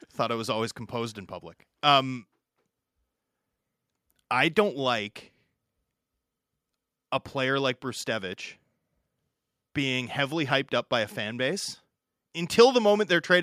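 Nothing in the speech recording stood out as a technical problem on listening.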